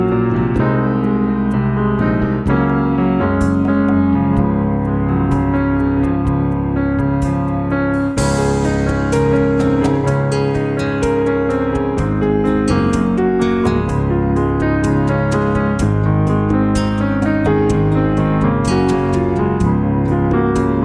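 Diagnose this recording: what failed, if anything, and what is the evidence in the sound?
Nothing failed in this recording. No stage between capture and playback leaves any audible evidence of trouble at any point in the audio.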